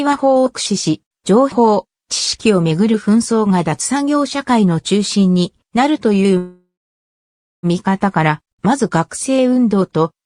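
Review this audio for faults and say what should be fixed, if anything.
Call audio freeze, 6.37 to 7.66 s: the sound fades into 0.95 s of silence, then resumes where it stopped, likely delayed packets emptying the jitter buffer. A more stable network path and a deeper adaptive jitter buffer would prevent it.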